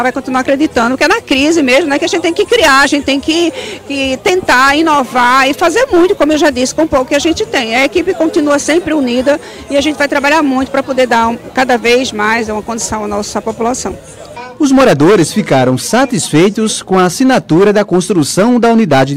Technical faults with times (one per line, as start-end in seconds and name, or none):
0.00-19.16 hard clipping